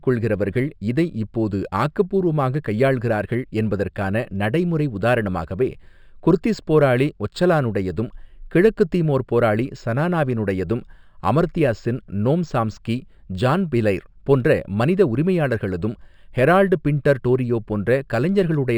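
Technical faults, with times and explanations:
Throughout: imaging from linear upsampling. The rate appears to have been raised by straight-line interpolation, which fits a source at 12 kHz brought up to 48 kHz. That weak filter dulls the top of the original band and leaves a faint mirrored copy of the speech spectrum between 6 kHz and 12 kHz, roughly 35 dB down, heard as a light metallic shimmer on sibilants. On a spectrogram, the speech energy below 6 kHz is faintly reflected upside down above that line.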